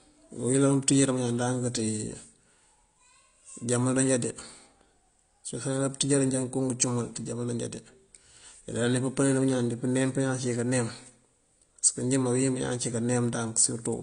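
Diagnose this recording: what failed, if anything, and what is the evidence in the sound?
AAC compression, present throughout: a codec-stage fault. The speech has nothing above 9.8 kHz and a dull, smeared, warbling texture on sustained sounds and sibilants. This is likely an AAC-LC encode at a low bitrate, around 32 kbps, where the encoder lowers the cut-off and coarsely quantises the remaining bands.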